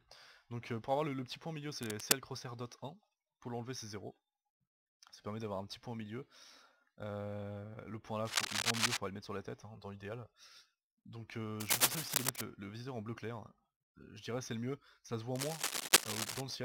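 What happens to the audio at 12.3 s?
Cable scratch noise runs from 11.60 to 12.41 s, so 12.3 s falls near the end of the burst. For about 0.8 s, a dense, uneven scratching and rustling rides over the sound, roughly 10 dB louder than the audio itself. The likely cause is a worn cable, connector or control being moved, its contact resistance jumping rapidly and injecting irregular noise bursts into the signal path.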